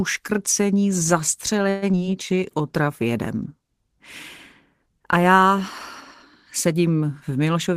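At 1.69 s the sound stalls for about 0.13 s as a call audio freeze: the last sound is stretched into a fading buzz, then resumes where it stopped, likely because packets arrived late and the jitter buffer ran dry. Nothing is lost, only delayed, which separates it from true loss.

At 1.92 s, lasting 0.03 s, comes short concealed packet loss: about 40 ms never reached the decoder, and a brief continuation of the preceding sound covers only part of the hole before blending back. It is heard as a quick smear or wobble, and unlike the freeze, material is actually skipped, pulling the timing back by roughly 30 ms.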